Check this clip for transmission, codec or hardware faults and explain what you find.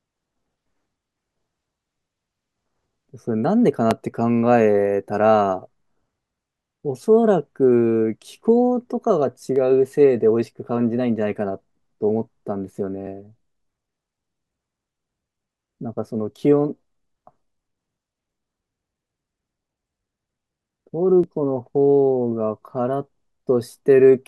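Four short skips break the speech, each a tiny forward jump, at 3.91, 9.56, 13.07 and 21.24 s. The likely cause is a dropped buffer (overrun): samples were overwritten before being read, losing roughly 7 ms and splicing the two sides together without any gap.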